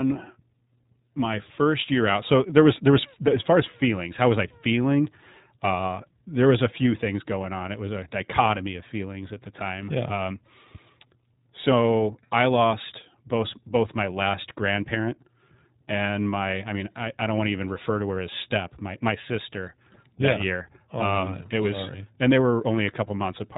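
iLBC codec damage runs through this speech clip, cutting everything above about 3.8 kHz and giving a rough, synthetic edge that fits 20 ms independently coded frames.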